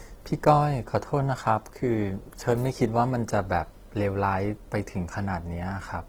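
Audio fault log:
throughout Opus compression: the speech was likely coded with Opus in its music mode at a low bitrate, around 16 kbps. Bands short of bits are refilled with folded or noise content, so the voice turns plainly grainy and rough, though content still reaches 20.2 kHz.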